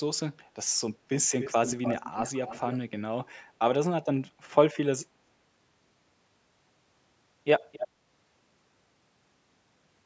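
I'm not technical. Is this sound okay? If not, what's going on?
No. From 1.12 to 2.79 s, and briefly again from 7.72 to 7.88 s, a fainter, slightly late second copy of the speech trails behind it, about 0.3 seconds behind, like a quick echo in a hall. This is an echo leak. The likely cause is that someone on the call was using a loudspeaker, their microphone picked the sound back up, and their echo canceller didn't fully remove it before sending it back.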